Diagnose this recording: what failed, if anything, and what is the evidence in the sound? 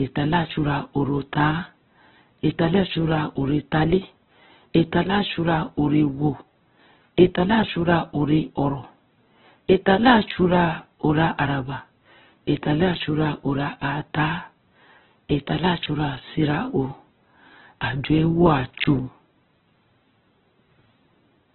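Codec stage, throughout the speech: nothing above about 4.2 kHz, and what remains is grainy, rough and noisy rather than swirly, with heavy damage. That's likely Opus compression in music mode, filling starved bands with folded or noise content, which fits roughly 8 kbps.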